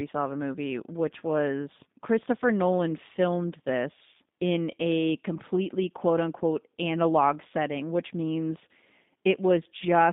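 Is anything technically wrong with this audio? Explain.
Yes. Throughout the speech, G.729 codec damage is plainly audible. The sound is confined to roughly 150 Hz to 3.7 kHz, and it has a rough, buzzy, synthetic edge. That edge comes from rebuilding each frame from a filter, pitch predictor and sparse pulses, which fits an 8 kbit/s G.729A link. That synthetic texture, not just the missing highs, separates it from a simple telephone band-limit.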